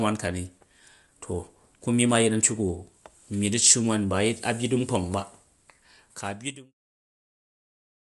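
Throughout the speech, a low-bitrate codec has likely applied Bluetooth LC3 compression in 10 ms frames, with a rate that points to about 48 kbps. Nothing remains above 11.6 kHz, and the upper band turns plainly breathy and grainy, even through the smooth fade-out ending at 6.75 s.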